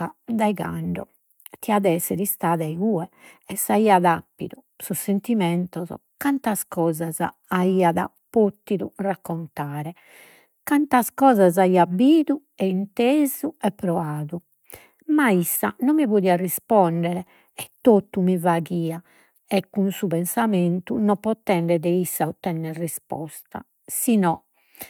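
The speech recording has no audible technical faults anywhere in its duration.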